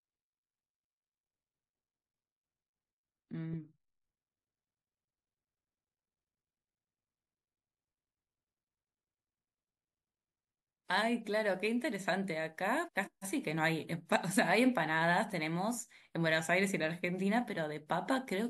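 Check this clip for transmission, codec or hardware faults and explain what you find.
There is one fault, a case of frames out of order, from 12.85 to 13.24 s. Two neighbouring runs of frames reached the decoder in swapped order and were decoded as received. Each run is about 186 ms long, which fits runs of four frames. The speech in that stretch plays with its two halves exchanged, giving a garbled flutter. No time is lost, so the speech lines up again straight afterwards.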